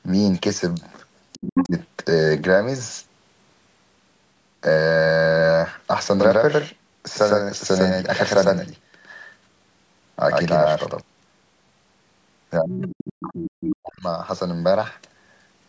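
Faint scraps of a second voice surface at 0.74 s and 1.32 s, then much louder at 1.59 s. This is the other side's voice leaking through, likely loudspeaker sound that the echo canceller failed to remove from the microphone pickup. From 1.37 to 1.76 s the talker's speech sinks sharply, by roughly 30 dB at its deepest, while that other voice is present. This is speech suppressed in double talk, likely the canceller turning everything down when it could not tell the talker from the echo.

From 6.2 to 11.0 s every sound is followed by an exact, equally loud copy about a tenth of a second later, without any reverberant tail. It switches on and off abruptly. This doubled audio track likely comes from the same signal being mixed in a second time through a slower path.

From 12.59 to 14.05 s the speech is pushed down heavily again, by around 40 dB at worst over about one and a half seconds, more speech suppressed in double talk. 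Within that stretch the other side's voice leaking through appears at 12.7 s and 13.26 s, fairly prominent, and once more at 14.02 s, barely audible.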